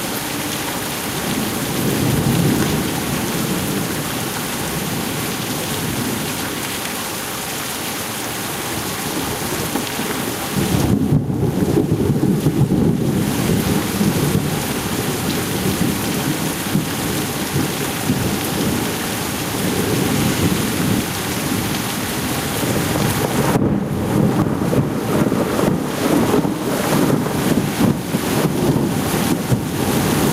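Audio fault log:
Throughout, gain pumping: the level swings by something like 15 dB, so loud and soft parts end up squashed close together. That breathing effect comes from input gain set way too high for the mic, with a fast limiter or compressor likely clamping down on every peak and letting go again between them.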